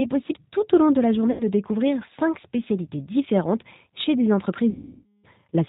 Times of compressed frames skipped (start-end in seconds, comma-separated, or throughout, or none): none